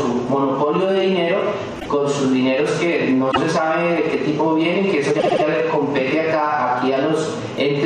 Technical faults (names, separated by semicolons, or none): repeated frames